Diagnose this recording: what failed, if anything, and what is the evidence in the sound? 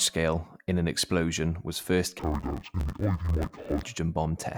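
Sample-format conversion read interleaved audio as planar from 2.19 to 3.84 s. Speech turns dull and robotic, buzzing at about 94 Hz, which fits 512-sample blocks.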